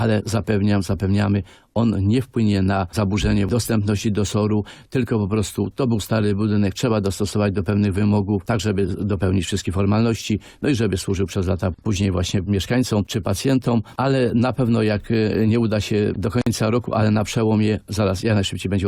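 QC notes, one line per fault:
16.42–16.47 s, gap at a join of encoded pieces. The sound drops out for about 50 ms and then resumes exactly where it left off, with nothing lost. The edges are softened by the codec. This points to two separately encoded pieces butted together without trimming. The encoder's start-up delay and the padding on the last frame both remained in, leaving a short stretch of silence at the seam.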